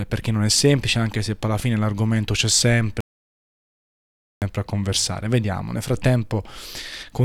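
Right after "alla fine l'argomento c'è", at 3.01 s, the speech drops out to silence and stays gone until 4.42 s, when it picks up again at "a conversare". That's about 1.4 s of silence, with no room tone at all, so whatever was said in that stretch is simply lost. It's an audio dropout to silence, most likely the input got cut off for a moment while the recorder kept writing silence.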